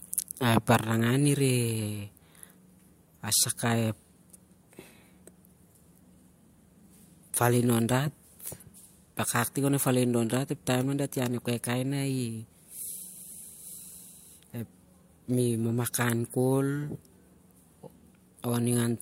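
From 5.98 s to 11.98 s the speech suddenly drops in quality, with more codec artefacts, then snaps back with no gap. That is an adaptive stream at a lower bitrate: the player briefly switched to a leaner encoding, which sounds like HE-AAC around 48 kbit/s.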